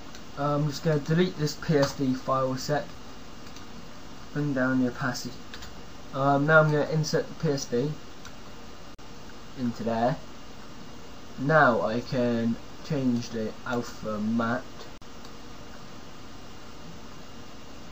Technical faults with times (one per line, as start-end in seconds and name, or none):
2.95 gap between stream segments
8.95-8.99 gap between stream segments
14.98-15.02 gap between stream segments